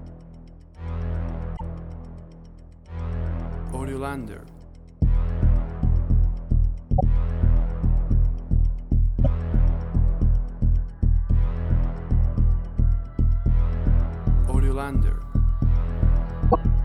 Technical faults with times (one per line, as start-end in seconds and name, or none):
1.56-1.61 broken MP3 bit reservoir
6.96-7.01 broken MP3 bit reservoir
9.24-9.27 broken MP3 bit reservoir
16.50-16.55 broken MP3 bit reservoir